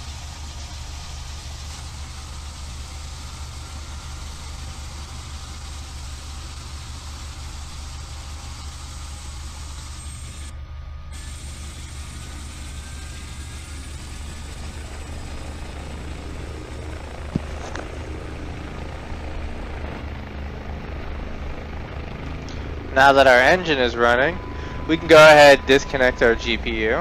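Nothing technically wrong turns up in this one; it's a straightforward listen with no faults to point to.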